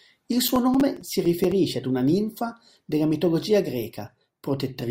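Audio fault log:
0.48–1.52 s, processor overload crackle: a gritty burst of crackle rides on the speech until the load eases, just before "ad una ninfa della". Around ten buffers of roughly 5 ms each were missed and left as silent gaps, each with hard edges. Unlike a single dropout, the clicks cluster over about a second.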